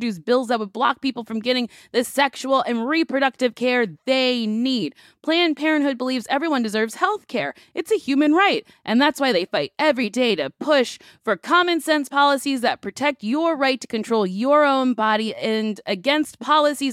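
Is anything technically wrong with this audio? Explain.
No, nothing technically wrong can be heard in this speech recording. There is nothing here that would need fixing.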